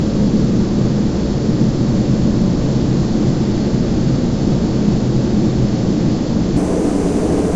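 From 6.57 s to 7.55 s the sound turns high and hurried, running 1.38 times fast and 5.55 semitones sharp, a wrong sample rate that fits 16 kHz audio played at 22 kHz.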